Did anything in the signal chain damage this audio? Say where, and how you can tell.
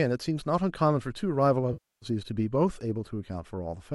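Yes, at the network or transport stage feeding the codec: AAC frame loss with concealment from 1.73 to 2.06 s. About 0.29 s of coded audio never arrived, which fits roughly 29 frames of the short frames that the low-delay AAC compression likely in use (AAC-ELD, around 64 kbps) works in. The decoder covers the hole by reusing the last good spectrum with scrambled phase and fading energy. You hear a smeared, noisy, phasey stretch that sinks, then normal sound returning at 2.06 s.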